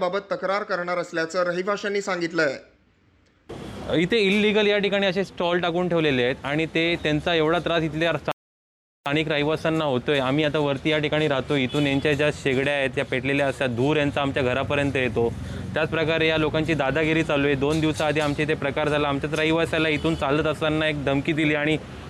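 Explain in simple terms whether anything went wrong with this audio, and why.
A rebuffering stall interrupts the audio from 8.32 to 9.06 seconds. The player ran out of downloaded audio and had to wait for more to arrive, so the sound cuts to silence for about three quarters of a second. When enough data came in, playback picked up exactly where it had stopped. Nothing is skipped or lost; the pause simply adds about 0.74 seconds to the listening time.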